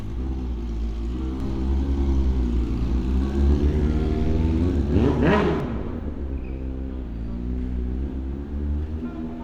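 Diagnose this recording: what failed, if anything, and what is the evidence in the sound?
A doubled audio track runs from 1.40 s to 5.60 s: a full-band copy of the sound trails about one and a half seconds behind, about 5 dB quieter. It starts and stops abruptly with no decay or room colour, unlike an acoustic echo. The likely cause is a second, slower capture path or a misaligned edit.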